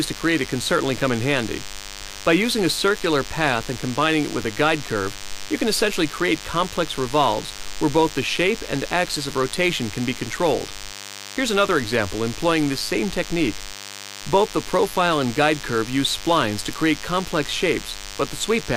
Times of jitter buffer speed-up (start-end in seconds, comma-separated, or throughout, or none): none